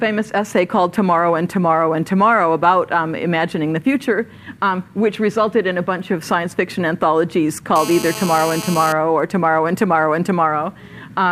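From 7.76 s to 8.93 s a GSM phone buzz sits under the sound, about 11 dB below it. A nearby 2G handset on a call transmits bursts about 217 times a second, and the audio circuitry rectifies that radio energy into a hard, raspy 217 Hz buzz with many harmonics. Mains hum is a smoother tone at 50 or 60 Hz and its multiples. This buzz is harsher, pitched at 217 Hz, and holds steady until it stops.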